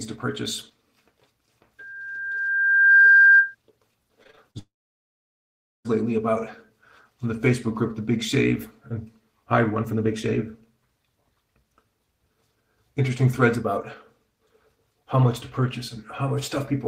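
From 1.79 s to 3.55 s there is loudspeaker feedback squeal: a microphone is picking up the speaker it drives, and at 1.6 kHz the loop gain has gone above one. A pure tone swells over about a second until it sits roughly 10 dB above the rest of the sound, then stops. On a spectrogram it shows as a single bright horizontal line at 1.6 kHz that thickens and brightens as it builds. In the waveform the envelope bulges steadily upward across that stretch.

Between 4.23 s and 4.57 s comes repeated packet loss, heard as choppy, robotic sound. Five short holes fall in about a third of a second, the longest 38 ms, and together they cover roughly a third of the span. Each hole is filled by extending the preceding sound, which gives a stuttering texture with fragments missing. A spectrogram shows smeared, repeated vertical slices and broken harmonics. The waveform has small periodic-looking patches where the signal was copied forward.

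Right after, from 4.59 s to 5.87 s, the sound disappears for about 1.3 s, most likely a long network dropout. Briefly the last sound trails on as a fading buzz, and then roughly 1.16 s of silence follows before the audio resumes further on, with the missing section simply gone. On a spectrogram this is a short smeared tail fading into an empty band. The waveform flattens to a near-straight line until the signal abruptly returns.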